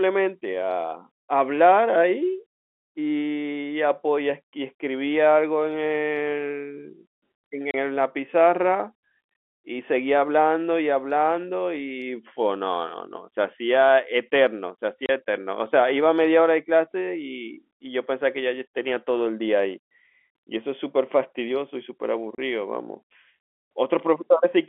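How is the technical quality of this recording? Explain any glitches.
The speech comes through a telephone-band line, with nothing heard above about 3.5 kHz, and is broken by three short dropouts.

Packet loss filled with silence occurs at 7.71, 15.06 and 22.35 s. Each is a 30 ms hole, which fits one lost packet whose slot was left empty. It sounds like a hard-edged gap. Concealment would instead smear or repeat the surrounding sound.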